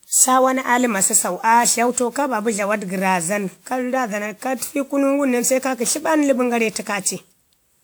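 All through, the speech has generation loss: swirly, hollow and smeared, with blurred attacks, likely from about seven WMA 1 re-encodes at what sounds like 128 kbit/s.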